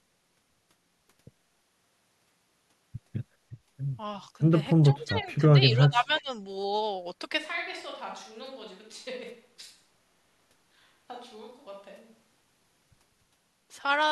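Speech, with two faults. From 4.89 to 6.3 s the voice dips by up to about 15 dB in broken pieces, likely speech suppressed in double talk; the cuts are choppy, not a steady fade. From 7.39 to 12.4 s it abruptly turns roomy, hollow, about 10 dB quieter and noisier, likely a switch to a distant microphone, not added reverb, since it changes suddenly both ways.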